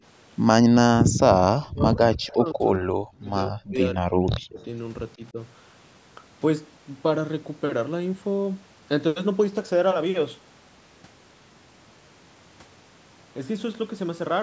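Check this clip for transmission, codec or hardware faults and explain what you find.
The speech has two stretches where it is pushed down while another talker seems active, and one brief echo leak within the first of them.

Speech suppressed in double talk, 1.55 to 4.67 s and again 5.16 to 5.38 s. The likely cause is an echo canceller that could not tell this talker apart from the far end's loudspeaker echo during simultaneous talk, so it attenuated everything. In the first span, about two seconds of the speech drops away in pieces, at worst by around 40 dB. The second is a shallow dip of around 10 dB lasting a fraction of a second.

Echo leak, 2.31 to 2.36 s. A short scrap of the voice returns 149 ms late, sitting well under the direct speech at roughly 25 dB down. This is likely residual loudspeaker sound on one side of the call that its echo canceller failed to remove and that was sent back into the call. 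It is heard as a faint, delayed copy. The call's microphone processing leaves nothing above 8 kHz, which is expected and not a fault.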